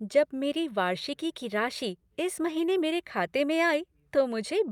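Speech recording, no technical faults detected anywhere in the clip.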